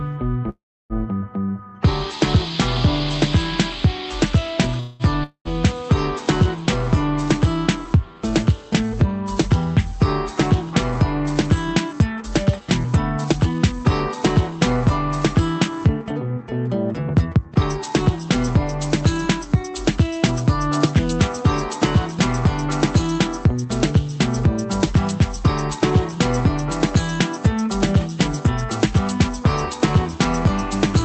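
At 0.49 s the likely cause is packets held up in transit, leaving the jitter buffer empty. This produces a call audio freeze: the last sound is stretched into a fading buzz that drops to about 0.32 s of silence. The sound resumes at 0.93 s with a 0.4 s gap inserted and nothing lost. A shorter freeze from 4.80 to 5.03 s fills about 0.2 s with a fading buzz and no silence.

From 5.24 to 5.48 s the likely cause is a long network dropout, with no packets reaching the receiver. The last sound decays as a hiss, then 90 ms of silence follows. The sound returns with about 0.36 s missing, which jumps it forward and absorbs part of the delay the freezes built up.

Between 5.73 and 9.13 s the buffer was rebuilding its reserve. This jitter buffer slow-down repeated single pitch periods many times over. The sound plays at 97% speed with the pitch unchanged, drawing sounds out by a total of about 123 ms.

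From 11.93 to 13.85 s, and again from 15.54 to 21.44 s, the buffer held more than its target. This jitter buffer speed-up removed short pitch-period slices to cut the delay. The sound runs at 107% speed, hurried but at the same pitch, shedding roughly 0.15 s and 0.4 s. Throughout the clip the call codec leaves nothing above 8 kHz.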